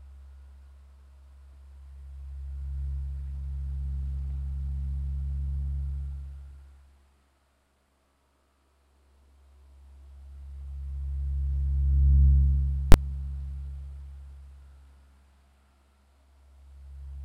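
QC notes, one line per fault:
12.92 s, invalid numbers at full scale: a calculation produced invalid values, pinning output to maximum for about 20 ms, heard as a single loud bang.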